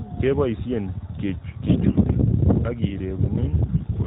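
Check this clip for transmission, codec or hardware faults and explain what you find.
AMR bit errors occur from 1.66 to 2.05 s and again from 3.68 to 3.87 s. A weak radio link flipped roughly one bit in ten in the less protected parts of the mobile codec's frames, while the check on the critical bits still passed. Excitation pulses land in the wrong places, and pitch, gain and spectral detail drift. Level and pitch roughly hold, but the speech turns hoarse, scratchy and gargly. The surrounding narrowband sound stays band-limited below 4 kHz.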